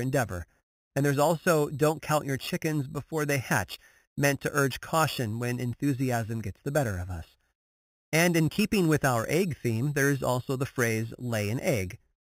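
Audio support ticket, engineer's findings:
Imaging from sample-and-hold upsampling, whole clip. Bright metallic fizz riding on the speech, tracking its level. First mirror image at 4–8 kHz, about 15 dB below signal, moving opposite to pitch. Samples repeated without a smoothing filter; rate fits 8 kHz raised to 48 kHz.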